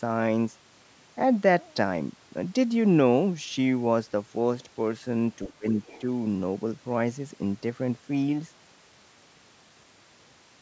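From 5.48 to 5.78 s, speech suppressed in double talk: the level sinks by roughly 20 dB, likely from the echo canceller ducking both talkers. The waveform visibly pinches.

From 5.84 to 6.01 s, the other side's voice leaks through faintly, about 25 dB below the speech, likely residual loudspeaker echo. It shows as a weak, separate trace on the spectrogram.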